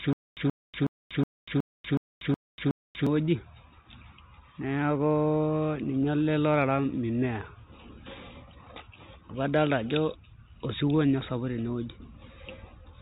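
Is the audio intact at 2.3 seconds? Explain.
No, 2.3 s falls inside a stutter with silent gaps already under way from 0.0 s to 3.07 s. A 0.13 s burst replays eight times, each followed by 0.24 s of digital silence. The likely cause is a stalled stream replaying its last fragment. Unlike dropouts, the same fragment returns, and unlike a seamless loop, dead silence separates each repeat.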